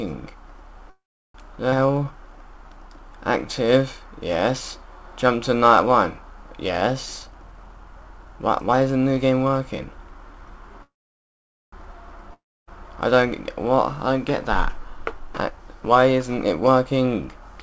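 At 0.90 s the sound halts in a call audio freeze, likely from packets held up on the way so the jitter buffer ran empty. The last sound carries on briefly and fades, then about 360 ms of silence, 0.45 s in all, before the audio resumes where it stopped with nothing lost. On a spectrogram this appears as a smeared, flat-topped band decaying into a blank column; the waveform shows a tapering envelope followed by a flat line.

Between 1.70 and 1.74 s there is a skip ahead: roughly 100 ms of audio is dropped and the two sides are joined almost directly. The waveform shows an abrupt seam, and the spectrogram shows a hard vertical discontinuity where the harmonic pattern changes without transition.

From 1.86 to 3.67 s a jitter buffer slow-down stretches the sound to 93% speed, adding 128 ms by repeating single pitch periods to rebuild a reserve. The pitch stays the same while sounds drag. Spectrogram harmonics look elongated horizontally, and the waveform shows repeated, near-identical cycles.

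A jitter buffer speed-up runs from 7.23 to 10.77 s at 113% speed, trimming about half a second by cutting short pitch-period pieces to reduce an oversized buffer. The audio sounds hurried but keeps its pitch. Spectrogram features look compressed in time, with tiny splice points visible in the waveform.

At 10.82 s a second call audio freeze follows, again likely caused by the buffer running dry, lasting 0.90 s, about 840 ms of it silent, before playback picks up unchanged. It shows the same fading tail and blank gap on a spectrogram, only wider.

From 12.34 to 12.69 s a long network dropout, likely from audio never arriving, leaves a short decaying continuation of the last sound, then about 290 ms of silence. Playback then returns further on, with about 340 ms permanently gone. The gap looks like a freeze on the spectrogram, but the content on either side no longer lines up.

From 14.87 s to the end, a jitter buffer speed-up plays the audio at 108% speed and removes about 200 ms, with the same time-compressed look. 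Throughout, the G.722 call path leaves nothing above 8 kHz, visible as an empty band at the top of the spectrogram.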